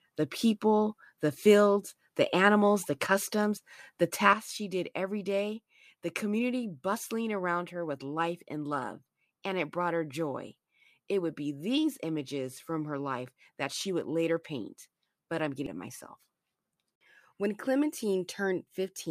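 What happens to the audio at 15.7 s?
Damaged data in the compressed stream hits at 15.66 s. The decoder misreads a corrupted frame, loses sync and jumps to the next valid header, producing a brief blip or squawk.

A sudden gain jump also affects this moment, since it runs from 4.33 s to the end. The sound and background noise drop together by about 8 dB in one step, likely from a gain setting applied instantly without a ramp.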